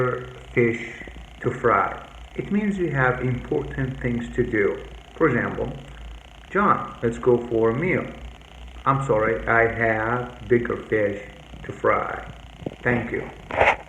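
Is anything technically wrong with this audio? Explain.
No, nothing in the signal points to a technical problem.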